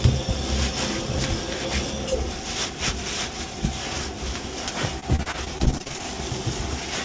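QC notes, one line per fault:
5.00–6.01 s: repeated packet loss (robotic sound). The sound turns choppy as 13 short holes, the longest 38 ms, are each patched by stretching the last sound, so about a quarter of the stretch is concealed, through a G.722-like path cutting everything above 8 kHz.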